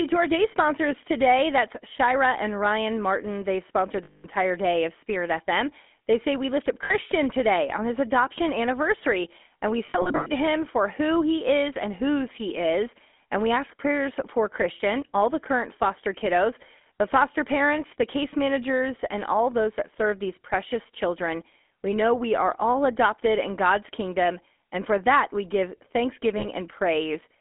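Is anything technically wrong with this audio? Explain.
Yes, there are three kinds of fault in this speech clip.

Throughout, the speech has a buzzy, gravelly roughness and a narrow telephone band of about 250 Hz to 3.6 kHz. This is GSM full-rate codec damage, consistent with 13 kbps coding. It models the vocal tract and excites it with sparse, regularly spaced pulses, so the fine detail of the voice is lost.

From 0.13 s to 27.33 s, faint regular ticks come roughly ten times a second, heard only while sound is present. These are likely clock slip clicks. Two devices running on unsynchronised clocks, with a mismatch of roughly 300 ppm, slip by one sample at a time.

At 4.04–4.26 s (200 ms), 6.84–6.94 s (60 ms), 9.86–10.28 s and 26.38–26.47 s (40 ms), the sound freezes into a rough, metallic ring. These are lost GSM frames, concealed by repeating the last good frame. The 9.86 s event is 240 ms of loss scattered over 400 ms, with the longest gap around 100 ms.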